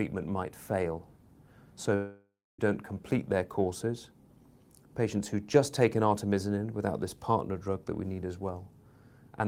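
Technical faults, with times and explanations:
1.95 to 2.60 s, long network dropout: the sound stretches into a smeared buzz that fades away, ending in about 240 ms of silence, and the speech then resumes abruptly at "don't complete their courses" with something skipped. This is likely a network stall: no audio arrived for roughly 0.64 s, so the receiver kept extending the last sound for about 0.63 s until it died out, and that lost stretch was never recovered.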